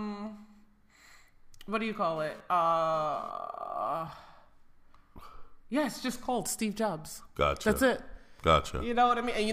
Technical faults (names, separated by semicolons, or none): GSM phone buzz